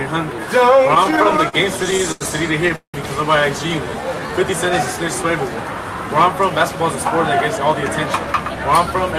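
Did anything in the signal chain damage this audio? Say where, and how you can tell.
Yes, network jitter upstream, with the receiver's buffer covering for it. From 0.83 to 2.23 s there are repeated stalls (stutter): 17 short holds, the longest 88 ms, stretching things while nothing's actually lost.

At 2.76 to 2.96 s the sound hangs and fades, with about 110 ms of silence, then resumes intact. That's a call audio freeze, likely a packet delay draining the buffer.

Between 3.84 and 4.33 s there's a jitter buffer slow-down. Repeated pitch periods add 84 ms, so things run at 84% speed at the same pitch.

There's also jitter buffer speed-up at 6.26 to 7.00 s (108%) and 7.57 to 9.12 s (105%). Each trims roughly 70 ms of pitch periods to shed surplus delay, so it sounds hurried.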